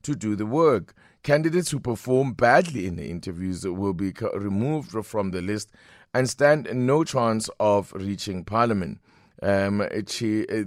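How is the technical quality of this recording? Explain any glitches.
No glitches to report here: nothing jumps out as a dropout, click, stutter or other technical fault anywhere in this speech recording.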